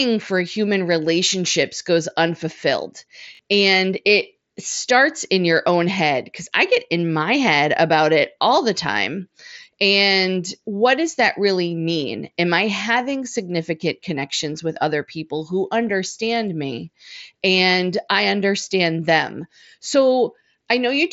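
At 3.35–3.39 s, after "human relationships goes unfulfilled", a repeated buffer: a 21 ms chunk, fitting a 1024-sample buffer, plays twice more as a stutter, showing identical waveform copies with hard joins.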